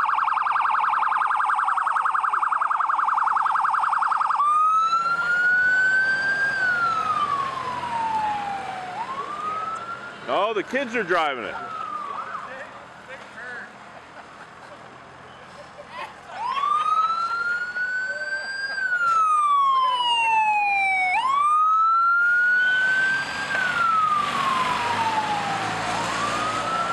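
At 9.73 s the compressed stream carries damaged data: a stretch of the file's bytes no longer matches what the decoder expects, so it misreads or rejects the frames there and loses its place until it finds the next valid frame header. The sound breaks for about 0.04 s, up to 9.78 s, with a brief disturbance of the kind such a decoding failure leaves, such as a chirp, click or short gap, before normal playback resumes.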